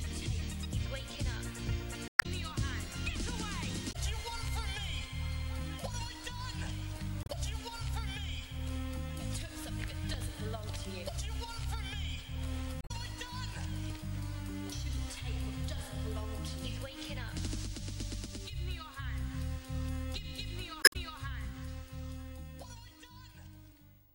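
Damaged data in a compressed stream breaks the audio five times: 2.08 to 2.26 s, 3.89 to 3.96 s, 7.23 to 7.30 s, 12.80 to 12.91 s, and 20.81 to 20.96 s. In each spot, corrupted bytes in the encoded stream lead the decoder to misread frames and lose sync until it finds a valid frame header again. Each failure lasts under a fifth of a second and comes through as a short chirp, squawk, click or hole that cuts across the sound.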